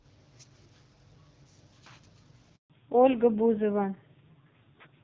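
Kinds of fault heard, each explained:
Handover gap: The call switches networks around 2.56 s and nothing comes through for about 140 ms, until 2.70 s. The speech cuts out quickly, sits in dead silence, then picks up again once the new link is running. Whatever was said in that window is just gone.
Fallback to narrowband: Right after the gap, from 2.70 s to the end, the clear HD Voice sound of the first half gives way to a duller, rougher sound with nothing above 4 kHz, which fits a drop to a low-rate narrowband AMR mode.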